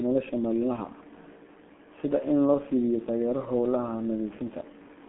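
G.723.1 codec damage runs from start to finish. The speech has passed through a low-rate telephony coder that works in 30 ms frames and refreshes its model of the voice only slowly. The heavy smearing fits a rate of about 6.3 kbit/s. Content sits in a narrow 200 Hz to 3.5 kHz line band, with nothing above 3.8 kHz. The result is muffled, hoarse speech with blurred, indistinct consonants.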